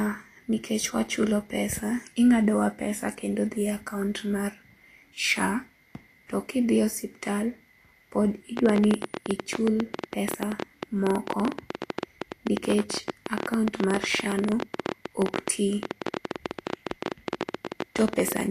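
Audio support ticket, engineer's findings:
Vorbis compression, whole clip. Hissy, grainy treble. Nothing above 14.2 kHz. Codec damage plainly audible throughout. Likely cause: low-bitrate Vorbis encoding, which fits a rate around 40 kbps. The encoder lowers its cut-off and quantises the residue above its spectral floor so coarsely that fine high-frequency detail turns into noise of similar energy. Result: rough tones and smeared consonant onsets.

Train of clicks, 8.57 s to 18.42 s. Ticking over the speech and in its pauses. About 14.6 clicks per second, irregular spacing, around 150 in total. Peaks roughly 15 dB above the speech. Clicks share much the same shape, pointing to one repeated source. Likely cause: interference from nearby equipment, a faulty connection or a power supply injecting pulses into the path.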